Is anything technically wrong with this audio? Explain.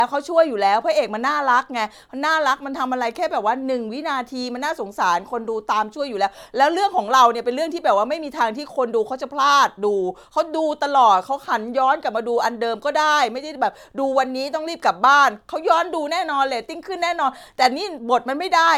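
Yes, this speech carries generation loss throughout. It sounds swirly, hollow and smeared, with blurred consonant attacks and nothing above about 19.9 kHz, which points to MP3 around 130 kbit/s, likely decoded and re-encoded several times, each pass adding fresh quantisation noise.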